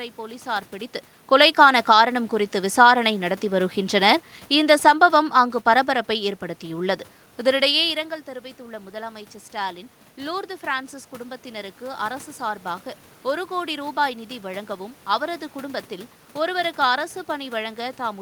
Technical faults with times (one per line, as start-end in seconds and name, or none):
1.37-7.98 automatic gain falling
8.26-12.09 automatic gain rising